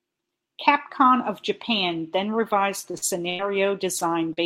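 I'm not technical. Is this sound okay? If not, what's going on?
No, there are three problems, all near the end of the speech, and all come from parts of the call arriving late or not at all.

Repeated packet loss (robotic sound), from 2.79 to 3.42 s. Small pieces of the call went missing four times in quick succession, the longest about 90 ms. Each time, the receiving end covered the hole by continuing the sound it had just played, so about a third of this stretch is patched-in filler. The speech turns choppy here, and about 0.12 s of real sound never arrives.

A short stall from a late packet, at 3.99 to 4.04 s. One piece of the call was about 22 ms late. With nothing new to play, the receiver stretched the last bit of sound until the piece turned up, then carried on from exactly where it had stopped. Nothing is lost, but one sound is held slightly too long, which can come across as a tiny hitch or buzz.

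Short concealed packet loss, at 4.33 to 4.40 s. About 40 ms of the call never arrived in time, and the receiver smoothed over the gap with roughly the same length of imitation sound before joining the real audio again. You hear a brief smear or wobble, and a very short sound in that spot may be missing.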